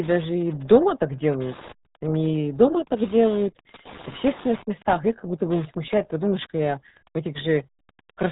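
A steady ticking runs under the whole of this speech recording, about ten clicks a second and sitting roughly 20 dB below the talker. That regular pulse, spaced 102.4 ms apart, is Wi-Fi interference: a nearby radio's beacon transmissions are being picked up and rectified by the audio circuitry, so each beacon becomes an audible tick that persists from start to finish. Alongside it, the speech is heavily muffled and gargly, with a hard ceiling at 3.8 kHz and nothing at all above it. That band limit and the smeared, bubbling texture are the signature of the RealAudio 14.4 codec, the old RealAudio 1 speech coder designed for dial-up links. The degree of damage fits an 8 kbit/s stream, which throws away most of the detail that gives consonants their clarity.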